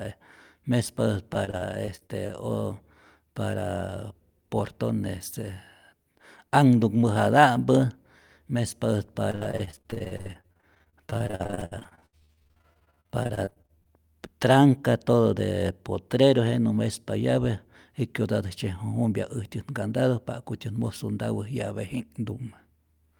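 Repeated packet loss (robotic sound) hits at 1.33–2.31 s and 9.31–13.92 s, before "tranca todo de potrero": gaps up to 67 ms are patched by stretching the previous sound, making the speech choppy and robotic.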